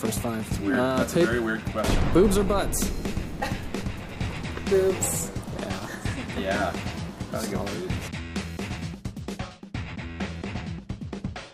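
From 9.40 s to the end, de-emphasis is applied wrongly. A treble cut went onto audio lacking matching pre-emphasis, so the top slopes down smoothly, about 11 dB lower at 10 kHz than at 1 kHz, dulling and muffling the sound. Unlike a low-pass filter, there is no abrupt cut-off.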